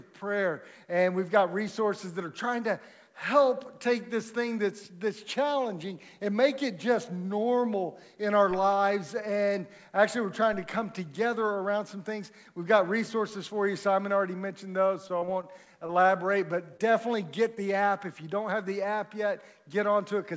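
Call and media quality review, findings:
Repeated packet loss (robotic sound), 15.08 to 16.11 s. The stretch is choppy, with eight short dropouts in about a second. The longest gap is 22 ms, and concealment fills about 13% of the span. The cause is in the network, jitter buffer or PLC path: each missing piece is patched by repeating the last sound. On a spectrogram, harmonics smear flat across the gaps. The waveform shows repeated, too-regular cycles.

Short concealed packet loss at 16.77 to 16.81 s and again at 17.55 to 17.59 s. Each is a brief smear or wobble, with about 20 ms of audio missing. The cause is in the network or jitter buffer, with concealment in the decoder: the gap is filled by extending the preceding sound and then crossfading back. On a spectrogram, a thin vertical seam with stretched partials. The waveform shows a short repeated segment. The band stops at 8 kHz, as the call codec's normal bandwidth, consistent with G.722.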